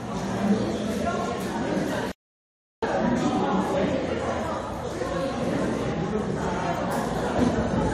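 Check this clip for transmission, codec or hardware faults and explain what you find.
Two faults are audible: cumulative codec damage across the whole clip, and one silent gap.

Generation loss, throughout: repeated AAC-style re-encoding, likely around three passes, stacks quantisation noise, leaving swirly, hollow, blurred attacks and nothing above 18.6 kHz. It is worse than a single 96 kbit/s-class encode would sound.

Playback stall, 2.12 to 2.83 s: the output goes silent for about 0.71 s, likely from the player being starved of data.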